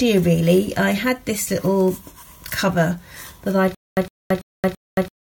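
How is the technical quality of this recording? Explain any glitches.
There's one real problem, and it hits right at the end. From about 3.75 s through to the close you get a stutter with silent gaps: a short burst of about 110 ms keeps coming back, followed each time by roughly 224 ms of dead digital silence, so it cycles every 334 ms and repeats four times. That's likely a stalled player or stream replaying its last fragment on each retry, and whatever audio should have filled that stretch is gone.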